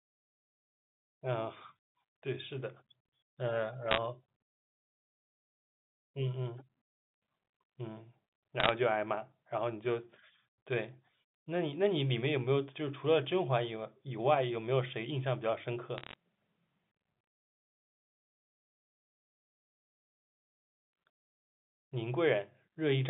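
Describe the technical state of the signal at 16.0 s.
Bit errors on a digital phone line strike the signal from 15.98 to 16.16 s: bits, roughly four in every thousand, flip in transit, and each flipped bit corrupts a single sample of the G.711 stream. Where a high-order bit, or the sign bit of a loud sample, is hit, that sample jumps far from its neighbours, producing sharp ticks that cluster into a brief crackle laid over the unchanged speech, which remains confined to the telephone band of about 150 Hz to 3.6 kHz.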